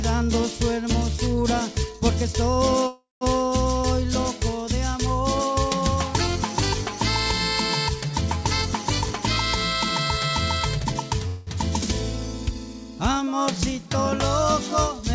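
From 2.87 to 3.24 s a call audio freeze, likely from packets delayed until the jitter buffer ran empty, extends the last sound as a fading buzz that ends in about 180 ms of silence. The sound then resumes where it stopped, so a 342 ms gap is inserted with nothing lost. On a spectrogram this appears as smeared, repeating bands thinning to a blank column, and on a waveform as a decaying envelope flattening out.

From 8.86 to 9.25 s a jitter buffer speed-up trims pitch-period slices to shed roughly 70 ms, running the audio at 118% speed at unchanged pitch, so it sounds hurried. The waveform looks compressed in time, with harmonic spacing unchanged on the spectrogram. A second speed-up from 10.60 to 11.11 s runs at 119% and removes about 100 ms.

From 11.27 to 11.50 s another call audio freeze fills 200 ms with the repeated buzz and no silence. It shows as stretched, repetitive texture before normal detail returns. 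Throughout, the G.722 call path leaves the spectrogram empty above 8 kHz.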